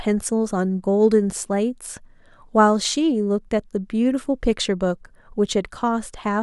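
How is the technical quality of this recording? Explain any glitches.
No glitches or technical faults can be heard anywhere.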